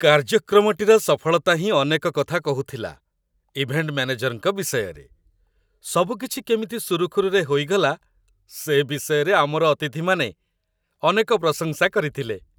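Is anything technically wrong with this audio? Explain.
No, nothing technically wrong stood out on listening to this speech recording.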